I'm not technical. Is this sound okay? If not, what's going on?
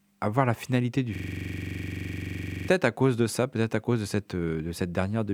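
No. From 1.15 to 2.68 s, right after "voir la finalité du", there's a system hang loop: the computer froze, and a 43 ms snippet of speech repeated 36 times, making a buzzy stutter before "à cause de ça".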